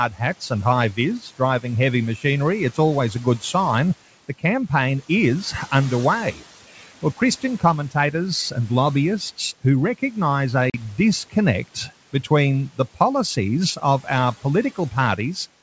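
Speech over what sounds like a G.722 wideband call, with room noise sitting about 23 dB under the voice. Twice the noise suppressor cuts into the speech, mistaking it for background: from 0.10 to 0.21 s, just before "and high", and from 6.75 to 7.21 s, just before "commentators and lobbyists who". Each time the sound gets pulled down by about 10 to 11 dB, so those bits come out faint and swallowed. Then there's packet loss on the ADPCM call at 10.70 to 10.82 s, right after "and lobbyists who recognise". About 40 ms drops to a hard-edged silence, which points to a couple of packets going missing. When the sound comes back, the decoder's predictor and step size are out of step with the sender's, so the speech returns slightly distorted before it settles.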